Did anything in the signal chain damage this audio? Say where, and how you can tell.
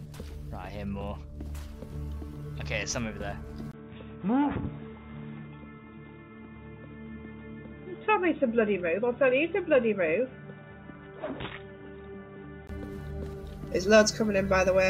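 Yes. From 3.72 s to 12.69 s the sound turns dull and boxy, with nothing above 3.8 kHz. A short gap of about 20 ms at 3.72 s marks the transition, the level falls by about 5 dB, and a new noise floor appears roughly 40 dB below the signal. This is likely an input switched to a poorer device at the driver level, such as a headset call profile, and full bandwidth returns at 12.69 s.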